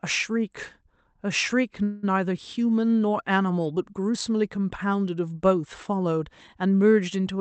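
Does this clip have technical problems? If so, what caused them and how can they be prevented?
Yes. From 1.83 to 2.05 s the speech stops advancing and a fading continuation of the last sound fills about 195 ms, a call audio freeze. The likely cause is packets held up in transit so the jitter buffer ran dry and the receiver extended the last audio. Speech then resumes where it left off, so nothing is lost but everything after runs about 195 ms later. A larger or more adaptive jitter buffer, and a more stable network route, would prevent it.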